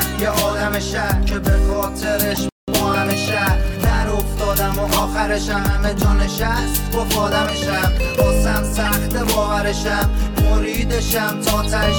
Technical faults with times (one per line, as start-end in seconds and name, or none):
2.31-2.37 corrupt frame decoded
2.49-2.68 playback stall
4.96-5.01 corrupt frame decoded
8.85-8.88 corrupt frame decoded
11.63-11.66 corrupt frame decoded